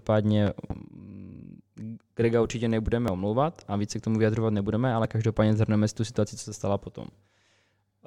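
Between 0.47 and 0.73 s, a loud pop arrives as two sharp thumps roughly 10 dB above the speech, likely a voltage spike added on top while the speech continues intact. At 3.08, 5.05 and 7.04 s, overlap between stream segments trims a few milliseconds where 2-second segments join, so the waveform jumps. Each join gives a tiny click or skip, unlike the pop's added burst.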